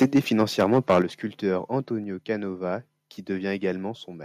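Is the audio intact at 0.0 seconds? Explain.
No. From 0.01 s to 0.99 s the sound shows microphone overload: the peaks run about 8 dB past the converter's limit, and a few percent of samples are flattened at the ceiling. The likely cause is an input level set too high for the converter, so the waveform tops are sliced off. That squaring adds a harsh, crackling edge to the loudest moments across this opening second.

At 0.03 s there is also a microphone volume stepped down event: the level of both the foreground and the background drops suddenly by about 3 dB in a single step. This is likely the call software detecting the clipping and cutting the device's input volume at once. The result is an abrupt dip in loudness rather than a smooth fade, with the distortion continuing after it.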